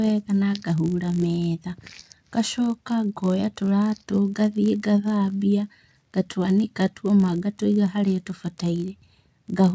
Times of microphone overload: none

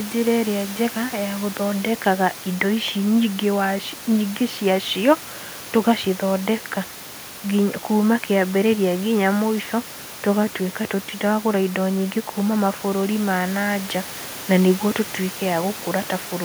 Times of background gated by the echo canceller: none

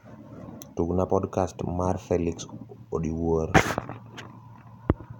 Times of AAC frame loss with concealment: none

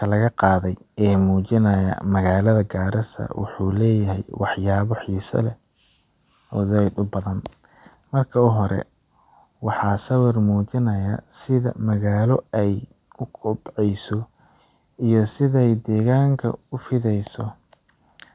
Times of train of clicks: none

